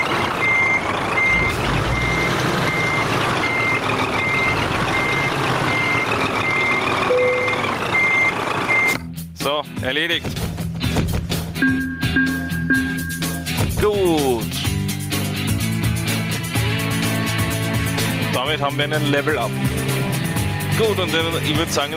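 Gain pumping runs through the whole clip: the gain swings around 10 dB under loud moments, likely from gain set too high into a fast limiter.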